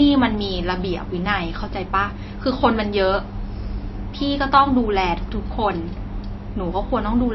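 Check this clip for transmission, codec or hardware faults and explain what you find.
One codec fault runs through the whole speech clip. Nothing is present above 5.8 kHz, and the sound has a watery, swirling texture with smeared consonant attacks, which is likely MP3 compression at a starved bitrate, which fits about 26 kbps. The encoder cuts the treble and drops weak frequency lines that flicker between frames.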